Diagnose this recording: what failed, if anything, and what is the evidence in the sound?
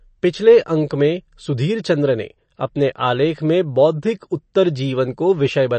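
Codec stage: throughout, speech sounds watery and swirly with nothing above 8.3 kHz, likely MP3 compression at about 35 kbps. Flickering weak components rule out a simple low-pass filter.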